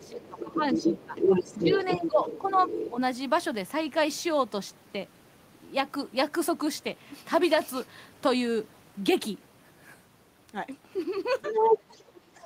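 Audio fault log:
0.0–1.14 s, 1.58–2.58 s, 2.9–2.99 s and 11.5–12.46 s, speech suppressed in double talk: the talker dips while the far end is also talking, by around 15, 10, 5 and 20 dB. That's likely the echo canceller ducking the talker because it can't separate them from the loudspeaker echo.
0.03–2.9 s, 11.42–12.0 s and 12.4–12.45 s, other side's voice leaking through: a second voice comes through alongside the talker, about as loud at first, then a bit louder, and finally barely there. It's likely loudspeaker playback the echo canceller didn't fully strip from the mic.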